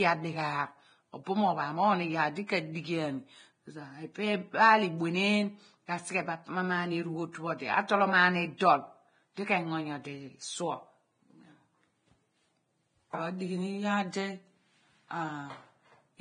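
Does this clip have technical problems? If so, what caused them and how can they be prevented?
Yes. Heavy lossy compression, likely Vorbis at a low bitrate near 23 kbps, quantises the treble coarsely and removes everything above 9.7 kHz, so the speech sounds hissy, grainy and dull throughout. Encoding at a higher quality setting or bitrate would avoid this.

A pre-echo from 2.47 to 2.49 s comes from a transform block spreading the quantisation noise of a sharp attack about 26 ms backwards, leaving a brief hiss before a softened onset. A higher bitrate, or an encoder that switches to short blocks on transients, would prevent it.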